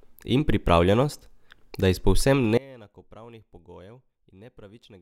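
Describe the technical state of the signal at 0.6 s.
At 0.6 s the speech signal is intact, with no dropout, clipping, glitch or other fault at that point.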